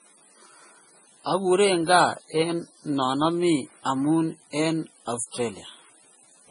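Speech with nothing above 10.6 kHz and two kinds of coding grit at once, swirly smeared highs over a coarser blocky roughness. That points to transcoding between lossy codecs, likely low-rate AAC re-encoded as low-rate MP3. A spectrogram shows an empty band above 10.6 kHz and speckled holes below it.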